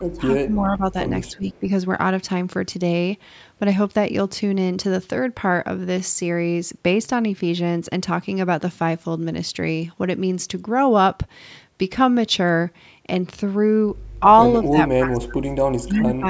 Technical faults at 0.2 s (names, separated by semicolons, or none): speech suppressed in double talk